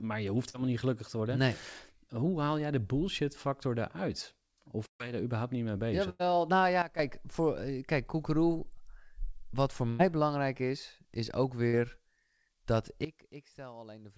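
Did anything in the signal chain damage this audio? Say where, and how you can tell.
Yes. At 0.50 s there is a brief smear lasting about 40 ms, where the sound seems to slide on and then blend back in. This is short concealed packet loss on the network leg of the call. A packet of speech arrived too late to decode, so the receiver extended the preceding sound through the gap. The band stops at 8 kHz throughout, which fits a wideband call codec.

Longer holes occur at 4.86–5.02 s, 6.10–6.21 s, 9.89–10.01 s and 11.67–11.75 s. Each sounds like a held buzz or fading hiss, after which the speech resumes slightly further on. These are bursts of packet loss lasting 140, 100, 100 and 60 ms. The jitter buffer had nothing to play for several packets in a row, so concealment stretched the last sound and faded it. In the first burst the fill fades to silence for about 110 ms before the speech returns.

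From 6.82 to 6.99 s the speech and the background noise drop together by about 12 dB, with no fade. From 13.05 s to the end they drop together again, by about 17 dB. Because both step down at once, this is a sudden gain jump. The likely cause is a digital gain or level setting in the call processing or driver stage being applied instantly, without a ramp.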